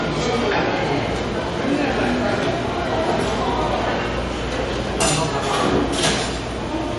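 From start to end nothing sounds above about 11.3 kHz, with the artefacts of the earlier encoding still present. This points to low-bitrate audio saved at a high bitrate, likely MP3 re-encoded, unlike plain low-pass filtering.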